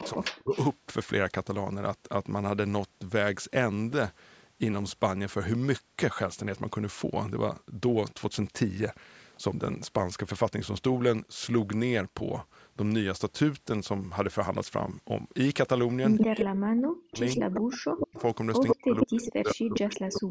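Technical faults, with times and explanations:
0.00–0.54 s, 16.24–18.18 s and 18.72–20.30 s: speech suppressed in double talk. The voice dips and drops out in pieces, around 30 dB at first and then around 40 dB, for about a second and a half in each later stretch. This is likely an echo canceller that could not separate near speech from loudspeaker echo and turned both down.
0.00–0.59 s, 16.18–16.44 s and 17.29–20.21 s: echo leak. A copy of the voice trails it by 148 ms. It sits about 10 dB below the speech at the start, then rises to roughly equal level or louder. This likely comes from a speakerphone's canceller passing some loudspeaker pickup back.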